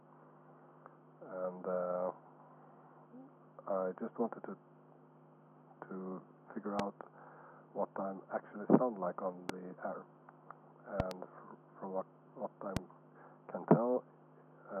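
Loud pops strike at 6.79–6.82 s, 9.49–9.52 s, 12.77–12.79 s, and as a double pop at 11.00–11.14 s. Each is about 20 dB above the sound and is likely a voltage spike from a switch or static. The waveform shows tall isolated spikes, and the spectrogram shows thin broadband vertical lines.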